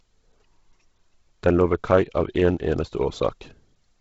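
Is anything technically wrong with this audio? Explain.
Yes. Throughout, the speech has a heavy breathy, grainy edge and nothing above 7.7 kHz, likely Bluetooth LC3 compression: the transform codec discards much of the upper spectrum and fills gaps with noise, which fits a bitrate near 16 kbps with 10 ms frames.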